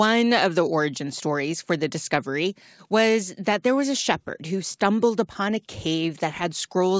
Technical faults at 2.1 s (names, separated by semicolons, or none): none